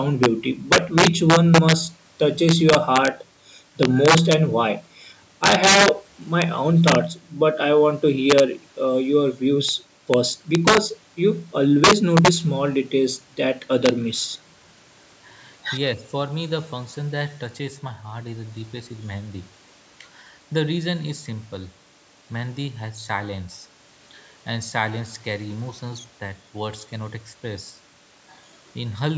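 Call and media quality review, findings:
Integer overflow, throughout: violent cracks on loudest speech peaks, far harsher than clipping. Gain stage driving signal about 7 dB past full scale without saturation; a small fraction of samples exceed the limit and wrap to opposite polarity. Call microphone high-pass path normal.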